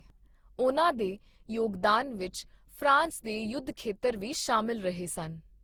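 Throughout the speech there is generation loss, likely from around ten Opus passes at about 64 kbit/s; unlike a single encode, the swirly, hollow smearing and blurred attacks exceed that bitrate.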